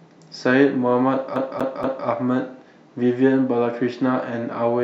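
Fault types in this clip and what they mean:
CD stuck on one turn: a scratch keeps knocking the laser back one track, so from 1.36 to 2.07 s the same 0.24 s slice of speech plays three times over, each pass cut by a brief mute. You get that quick, even skipping-disc stutter.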